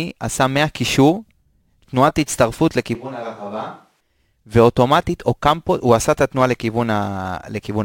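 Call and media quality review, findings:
Close mic signal likely dropped, capture falling back to a distant microphone, 2.95–4.01 s. Speech turns abruptly roomy and hollow, bass thinned, level down about 10 dB, room noise rising to about 35 dB under the speech. Hard cut in and hard cut back out, no crossfade.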